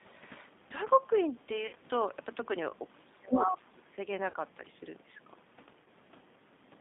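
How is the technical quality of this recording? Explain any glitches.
Quality is poor, with plainly audible narrowband coding, three dropouts and a stretch of suppression with leaked sound.

The G.729 codec colours the whole clip. The damage is plainly audible. Speech sounds rough and synthetic, and nothing lies outside roughly 150 Hz to 3.6 kHz. The coder rebuilds each frame from a filter, a pitch predictor and a few pulses, which fits an 8 kbit/s rate.

VoIP packet loss concealed by the speech codec appears at 1.67 to 1.76 s, 4.30 to 4.36 s, and 5.84 to 5.87 s. About 60, 40 and 20 ms of audio went missing. The decoder stretched its last pitch and filter, so each gap is filled with extended, fading sound. Weakness lingers briefly afterwards.

From 2.94 to 3.90 s the speech dips, by around 25 dB at its deepest. The likely cause is speech suppressed in double talk. An echo canceller facing both sides at once cannot separate them, so it turns everything down.

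At 3.32 to 3.44 s a second voice breaks through, roughly as loud as the main speech. This is likely the other side's voice leaking through. The far end, played on a loudspeaker, was not fully cancelled from the microphone.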